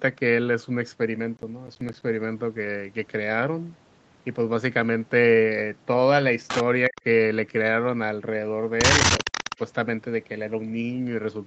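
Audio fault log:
1.37–2.02 s, processor overload crackle: a gritty burst of tearing crackle rides on the speech for about 0.65 s, then stops cleanly. The processor missed its deadline on a run of short buffers. Each miss left a tiny hole of silence with hard edges. The spacing points to buffers of around 10 ms and roughly ten of them dropped. Unlike a single network dropout, this is a dense cluster of clicks rather than one gap, and nothing is repeated or smeared.
6.88–6.99 s and 9.23–9.59 s, speech suppressed in double talk: the voice ducks briefly. At 6.88 s it falls very deeply, by something like 40 dB, for about a tenth of a second. At 9.23 s it dips more gently, by about 10 dB, across roughly 0.2 s of scattered drops. The cause is likely an echo canceller turning the near talker down while the far side was also heard, since both dips coincide with returning echo. Unlike codec packet loss, there is no glitchy fill, only a volume hole.
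6.96–7.01 s and 9.18–9.59 s, echo leak: a delayed copy of the voice comes back 360 ms after the original. At 6.96 s it is a brief scrap about 25 dB below the speech. From 9.18 s it lasts about 0.4 s and is much stronger, about 10 dB down. The cause is likely a loudspeaker on the far end whose canceller let part of the pickup through. The fixed 360 ms lag and the repeated speech, often thin and chopped, set it apart from room reverberation, which trails off smoothly rather than repeating.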